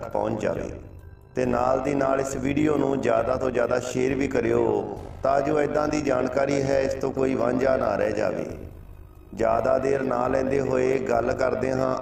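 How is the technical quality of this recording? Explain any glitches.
The recording has one fault running through the whole clip. Overlap-add ripple: frames were rejoined with uneven overlap gain, so the level pulses about 11 dB, roughly fifty times a second, giving a buzzy roughness.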